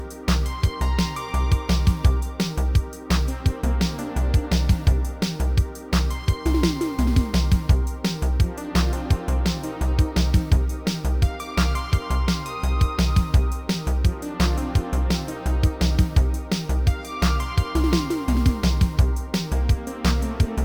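No technical faults can be heard anywhere in this clip.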